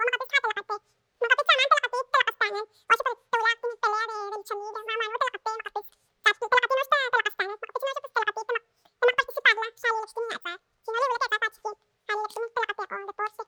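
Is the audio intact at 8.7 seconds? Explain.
No. At 8.7 seconds, as across the entire clip, the audio is read two samples at a time (double speed). The playback treats each pair of samples as a single frame, as if the stream were two channels or used samples twice as wide. The speech therefore runs at 2x speed and sits 12 semitones higher, a full octave.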